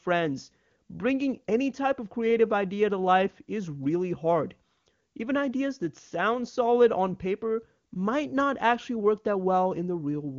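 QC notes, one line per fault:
No faults heard.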